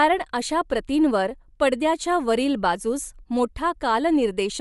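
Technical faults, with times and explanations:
Throughout: Bluetooth LC3 compression. The speech carries a plainly audible breathy, grainy sheen across its upper frequencies, where fine detail seems replaced by a noise-like fill, and the damage runs through the whole clip. This is likely the LE Audio transform codec trimming the upper spectrum and substituting noise, consistent with short frames of about 7.5 ms near 48 kbps, which keeps transients tight rather than smeared like longer-frame codecs such as MP3.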